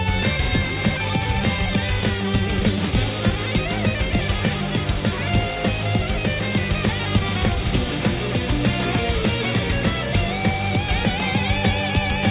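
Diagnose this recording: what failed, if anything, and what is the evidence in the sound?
Nothing stood out on listening that would point to a failure at any stage of the chain.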